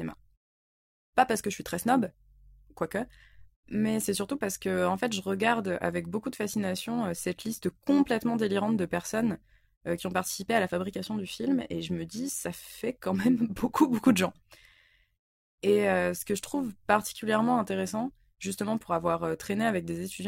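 From start to finish, the speech carries overlap-add ripple. The frames were rejoined with overlaps that do not sum evenly. So the level dips and swells once per frame, by about 6 dB, around a hundred times a second. It sounds like a metallic, robotic buzz.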